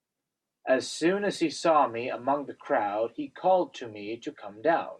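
At 1.57 s the speech turns dull and gritty right through to the end. That's a Bluetooth SBC bit pool drop: the link got congested, so fewer bits went out, which fits the bit pool falling from 31 to 15, around 105 kbps. The top bands starve and everything else gets coarse.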